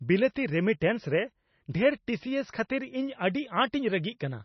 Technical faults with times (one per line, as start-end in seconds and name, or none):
0.00-4.44 MP3 compression